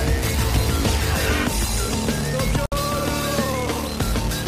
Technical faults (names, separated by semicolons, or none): gap at a join of encoded pieces